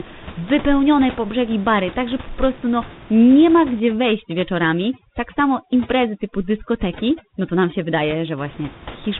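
From the start, the speech sounds rough and noisy, with nothing above 3.8 kHz. This is tandem speech coding: the call was decoded and re-encoded at link borders, passing through CVSD twice with an A-law stage between, so each coder compounds the previous one's damage.

From 3.80 to 8.38 s, just after "prostu no nie ma", the room noise, about 20 dB below the speech, collapses into twinkling near-silence. This is overdone noise removal: frequency bands near the estimated noise floor were suppressed too hard, taking quiet speech detail with them.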